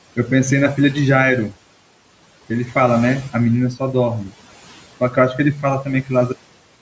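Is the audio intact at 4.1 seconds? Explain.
No. At 4.1 s, as across the whole clip, noise suppressor artifacts are present: band-by-band attenuation of about 18 dB pumps the room noise down between words and back up beneath them, unlike steady room noise.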